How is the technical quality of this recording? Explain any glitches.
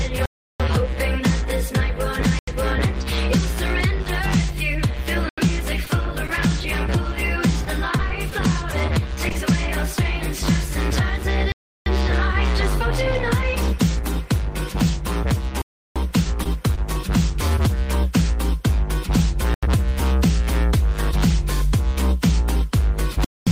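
The recording has repeated dropouts, several stretches of patched transmission loss and one brief stall.

Block of digital silence, at 0.26–0.60 s, 2.39–2.48 s, 5.29–5.38 s, 11.52–11.86 s, 15.62–15.96 s, 19.54–19.63 s and 23.25–23.47 s. The output buffer was likely not filled in time, so zeros were played instead. The lengths of about 85 ms and 341 ms fit whole buffers of 4096 and 16384 samples. The final gap lasts about 222 ms. Each one cuts abruptly to dead silence and back.

Short concealed packet loss, at 5.85–5.89 s, 16.23–16.27 s, 16.43–16.47 s and 16.75–16.79 s. In each case 20 ms of audio never arrived. The receiver extended the preceding sound over the hole and then blended back into the real signal. It comes across as a brief smear or wobble.

Short stall from a late packet, at 6.27–6.31 s. A packet arrived about 20 ms late and the jitter buffer ran dry. The receiver stretched the last sound by 20 ms and then resumed exactly where it had left off. 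Nothing is lost, but the sound hangs slightly too long, with a faint buzz or dip.

Scattered short gaps, spread across 7.65–9.37 s. Roughly seven separate packets, none longer than about 20 ms, were lost or late, and around 80 ms of audio is missing in total. Each hole was patched by continuing the preceding sound. The result is a string of small ticks and hiccups through an otherwise continuous stretch.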